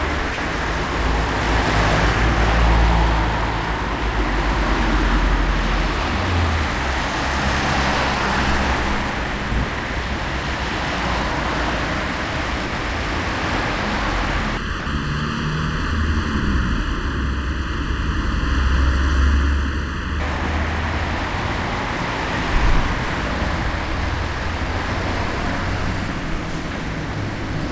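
At 0.34 to 0.38 s, 9.88 to 9.90 s, 12.66 to 12.72 s and 14.80 to 14.86 s, the sound briefly gives way to steady comfort noise for 40, 20, 60 and 60 ms, likely sound dropped by the voice detector, which mistook quieter passages for background and stopped sending.

From 14.57 to 20.2 s, channel delay (comb filtering) makes the sound hollow and phasey. One channel lags the other by under a millisecond, and summing them to mono cuts evenly spaced notches starting near 700 Hz.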